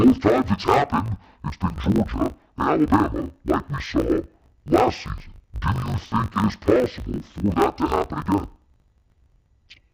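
The clip is speech, and throughout it suffers from interleaved audio read as planar. Each 20 ms block of alternating left and right samples has been split so its first half feeds one channel and its second half the other, halving the playback rate inside every block. The result drops the pitch an octave while keeping the overall pace, and the short block length adds a dull, robotic buzz at the 50 Hz block rate.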